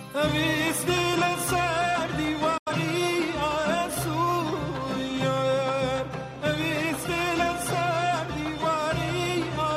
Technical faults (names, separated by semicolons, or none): digital broadcast dropout